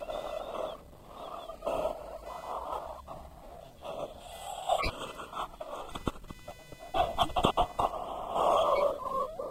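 A faint buzz pulsing at around 500 Hz, roughly 30 dB below the sound, runs throughout. This is computer activity noise, where processor or peripheral load disturbs the audio circuit's shared ground.

A sharp, fairly loud chirp at 4.78 to 4.89 s and a quieter blip at 8.76 to 8.82 s are each a corrupt frame decoded. Damaged compressed data, seemingly a few frames each time, was played anyway and put energy at the wrong frequencies.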